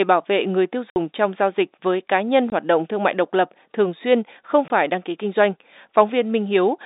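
Speech over a narrowband telephone-style channel shows packet loss filled with silence: hard-edged gaps at 0.91–0.96 s after "bảo vệ người tiêu" (60 ms), 2.50 s after "dịch với cá nhân", and 4.68 s before "đăng ký kinh doanh" (20 ms each). The gaps are dead silence in whole 20 ms steps, which fits lost packets, not concealment that would smear or repeat sound.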